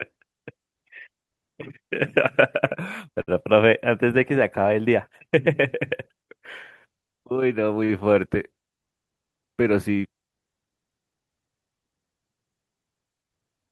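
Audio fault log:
3.21–3.35 s and 7.84–8.05 s: short stall from a late packet. Both times a packet showed up late and the jitter buffer ran dry, so the receiver stretched the last bit of sound, about 60 ms and then 46 ms, and carried on where it left off. Nothing's lost, but you hear a brief hold with a faint buzzy dip.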